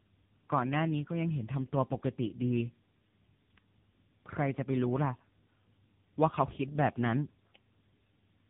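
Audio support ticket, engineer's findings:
Tandem speech coding across the whole clip: rough, muffled, warbly speech, nothing above 3.6 kHz. Sounds like three speech coders in a row, pointing to GSM full rate, then CVSD, then AMR-NB around 7.95 kbit/s, with G.711 A-law hops between. Each border decodes and re-encodes, so every coder chews on the previous one's damage and the errors pile up.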